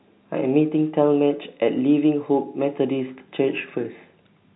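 The speech recording has no technical fault anywhere in it. It carries G.711 telephone coding, audible as a band limit with nothing above about 3.9 kHz, and any codec trace it leaves is faint at most.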